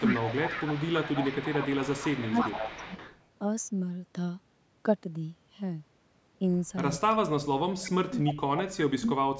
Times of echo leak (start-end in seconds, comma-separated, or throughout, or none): 0.00-3.24, 7.84-7.91, 8.24-8.81